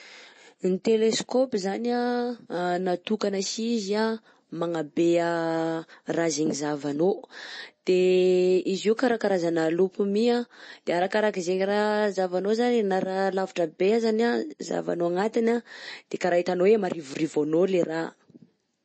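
MP3 compression runs through the whole speech recording. Nothing is left above about 8.3 kHz, where the encoder likely dropped the treble to save bits. Weak frequency lines flicker on and off between frames, giving plainly audible watery swirl and chirpy s sounds, which fits a 32 kbps MP3.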